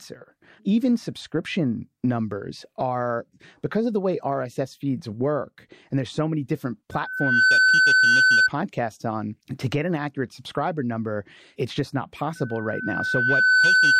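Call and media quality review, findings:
Loudspeaker feedback squeal, 6.92–8.50 s and 12.35–14.00 s: 1.5 kHz tone swells over the speech within about half a second, then about 1.5 s; mic hears speaker, loop gain above one.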